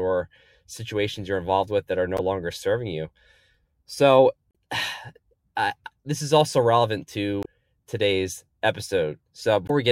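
Four brief bursts of damaged data in a compressed stream break into the speech at 2.17–2.20 s, 4.48–4.51 s, 7.41–7.46 s and 9.66–9.71 s, each lasting about 30 to 50 ms. Corrupted bytes make the decoder misread frames and hunt for the next valid header, so each spot comes out as a short chirp, squawk, click or hole.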